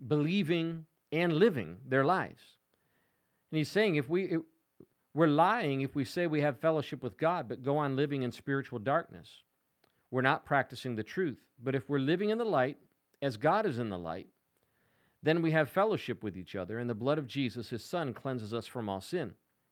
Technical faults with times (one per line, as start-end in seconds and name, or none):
none